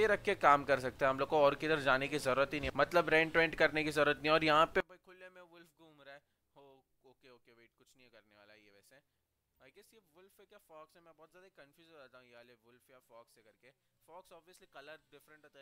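From 4.80 s to the end of the clip the audio suddenly collapses to a faint trace, roughly 27 dB quieter, with the centre all but gone and only a residue of the stereo difference left. That sounds like one channel inverted: with one side's polarity flipped, anything shared by left and right cancels when the two are folded to mono. The likely cause is a reversed channel somewhere in the wiring or processing.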